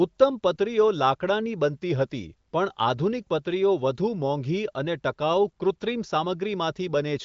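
No technical faults can be heard in the speech, which comes through the AMR wideband (HD Voice) codec at 23.05 kbit/s, with nothing above 7.5 kHz.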